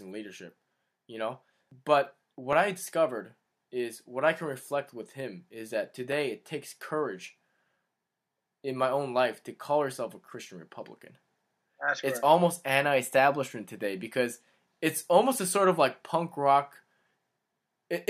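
Dropped samples are the likely cause of two sharp clicks in this speech clip, at 2.53 s and again at 6.12 s. Each time, a fraction of a millisecond of the stream goes missing, so the waveform leaps straight from one value to a later one instead of moving smoothly between them. That gap is far too brief to remove any audible sound, but the sudden step produces a single crisp click, visible as a thin vertical line across the spectrum.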